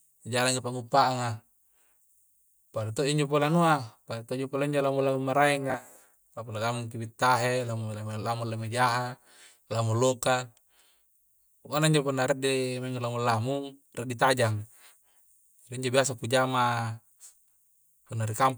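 Speech, with one fault: chunks out of order at 5.70 to 5.74 s, where a 20 ms chunk arrived one chunk late and played after its successor, leaving a brief jumbled stutter.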